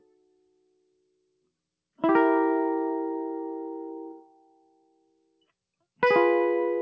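Across the whole piece of music, the level swings by around 20 dB. Sustained parts breathe and pump while sharp attacks stay intact, and everything rides on a dull band that stops at 8 kHz, which fits a G.722 call path. This is a noise suppressor applied to music: a speech-oriented suppressor stayed active, took steady tones and ambience for background noise, and kept pulling them down between transients.

From 0.0 to 1.5 s, and again from 4.14 to 5.48 s, the music sinks noticeably further, by about 22 dB at its deepest. Held tones thin out and decays are cut short, while sudden onsets survive. This is sound cut by the noise suppressor: over these stretches the suppressor classed the material as noise and attenuated it harder than the surrounding audio.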